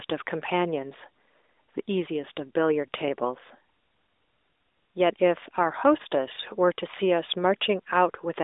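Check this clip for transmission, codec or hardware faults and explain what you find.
No transmission, codec or hardware faults turn up in this clip.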